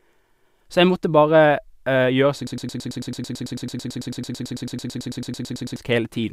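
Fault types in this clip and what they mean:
Broken-record loop: from 2.47 s to 5.76 s the speech locks onto a 110 ms fragment that repeats exactly, back to back, about 30 times. The playback or stream likely stalled and kept resending its last buffered piece, so the speech due in that span is lost.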